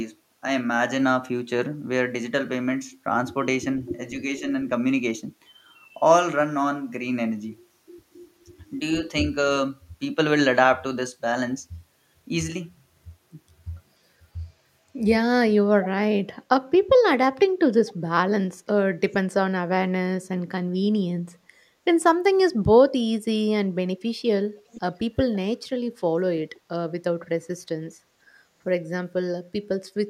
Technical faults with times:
15.82-15.88 echo leak
24.71-24.81 echo leak

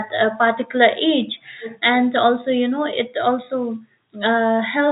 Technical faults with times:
none

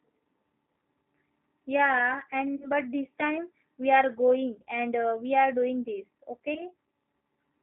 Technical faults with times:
0.00-7.62 G.729 codec
2.56-2.70 VoIP packet loss concealed by the speech codec
6.54-6.63 VoIP packet loss concealed by the speech codec

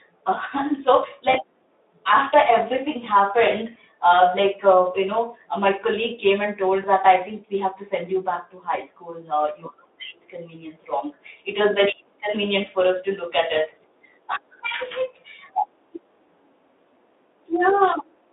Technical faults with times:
1.31-1.36 VoIP packet loss concealed by the speech codec
6.81-6.86 VoIP packet loss concealed by the speech codec

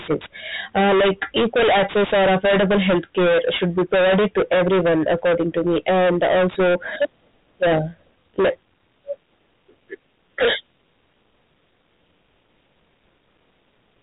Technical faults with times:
0.00-14.02 hard clipping

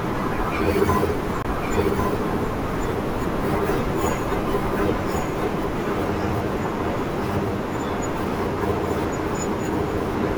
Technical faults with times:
0.00-10.38 doubled audio track
1.42-1.45 Bluetooth dropout

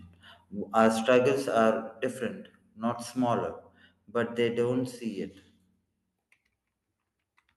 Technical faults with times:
0.79-1.17 microphone overload
1.02 microphone volume stepped down
2.04 microphone volume stepped down

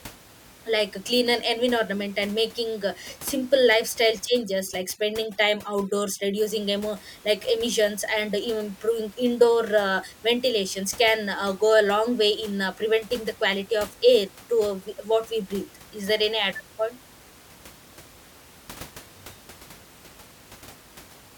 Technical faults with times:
4.28-6.38 overdone noise removal

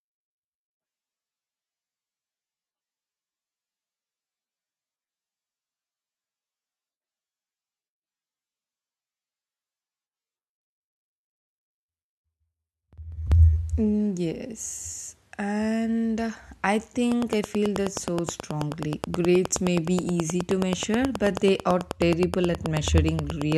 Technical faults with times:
17.12-23.53 train of clicks

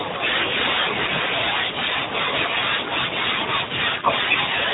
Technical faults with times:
4.14-4.18 chunks out of order

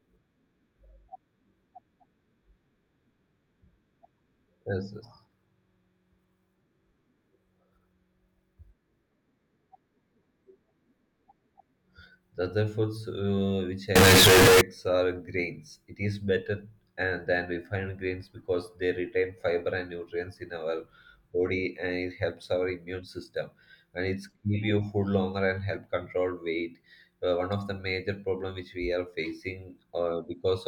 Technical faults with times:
13.96-14.61 float read as integer

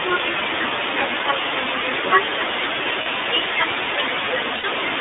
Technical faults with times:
0.00-5.01 low bit depth without dither
0.00-5.01 iLBC codec
0.32-0.34 lost iLBC frames
3.02-3.07 lost iLBC frames
4.55-4.66 lost iLBC frames

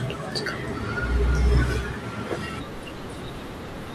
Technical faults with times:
none

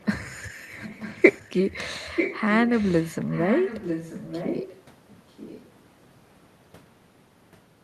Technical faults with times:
0.71-1.73 echo leak
2.16-4.77 echo leak
5.30-5.70 echo leak

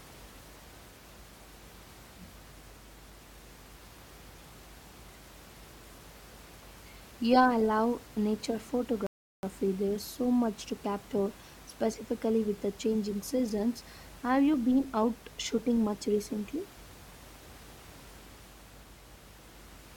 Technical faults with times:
9.07-9.43 rebuffering stall

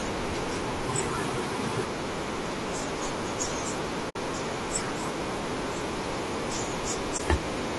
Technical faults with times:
0.00-7.78 low-delay AAC compression
4.09-4.16 AAC frame loss with muting
7.17-7.20 AAC frame loss with muting

